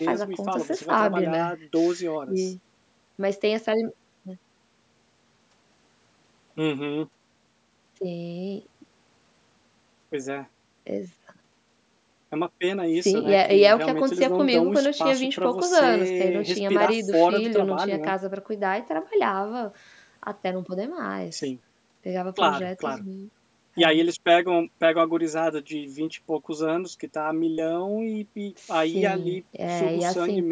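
No technical faults can be heard anywhere in this speech.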